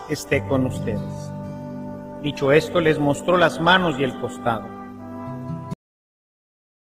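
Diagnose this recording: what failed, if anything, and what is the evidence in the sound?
From the start until 5.46 s the sound is dull, with the treble missing or replaced by synthetic hiss and stronger codec artefacts, then it abruptly becomes clearer with no gap. This is an adaptive stream starting at a low bitrate, a network and codec fault. The player opened on a cheap rendition, which fits Opus at about 16 kbit/s, and switched to a better one, consistent with 64 kbit/s, once it had measured the connection.

At 5.74 s the sound stops in the middle of a sound and falls straight to digital silence, with no natural decay. This is a cut-off end at the storage or playback buffer stage: the final buffers were never written or played out.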